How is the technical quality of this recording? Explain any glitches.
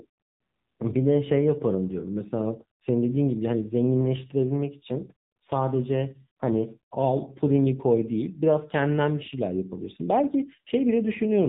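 The speech sounds narrow, muffled and noticeably buzzy from start to finish, with a synthetic, slightly robotic edge that is plainly audible. That is the AMR narrowband mobile codec (AMR-NB) at work. It samples at 8 kHz, so nothing above 4 kHz survives, and it rebuilds each 20 ms frame from a vocal-tract model fed by a few pulses. Here the coarseness points to a low mode, which fits roughly 7.4 kbps.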